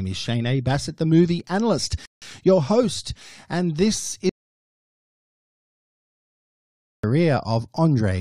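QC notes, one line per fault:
2.06–2.22 s, rebuffering stall: right after "the movie analyst" the speech halts in silence for about 0.16 s, then picks up at exactly the point where it stopped, with "your host and this" following intact. No syllable goes missing. The gap is only inserted time. That is the signature of a player that has drained its downloaded audio and waits for the next chunk before carrying on from the same sample, so the delivery gains a pause but loses nothing.
4.29–7.04 s, audio dropout to silence: after "your host and this" the speech cuts off mid-flow into dead digital silence. No room tone or hiss remains under it. About 2.7 s later the speech returns already in progress, so whatever was said in between is gone rather than delayed. Because the gap is lost material and not a paused stream, the likely cause is the input being lost upstream, such as a dropped link, a disconnected device or a stray mute, while recording carried on.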